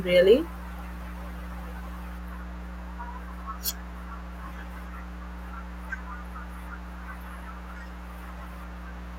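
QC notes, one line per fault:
Throughout, mains hum: a steady 60 Hz tone with weaker low harmonics, only a few dB below the speech, from power-line coupling such as a ground loop. A spectrogram shows unbroken horizontal lines at 60 Hz and multiples; the waveform carries a constant low ripple between phrases.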